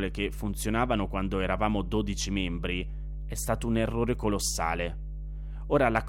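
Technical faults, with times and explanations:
Throughout, mains hum: a steady 50 Hz drone with low harmonics sits loud under the speech, from power-line interference through a ground loop or nearby transformer.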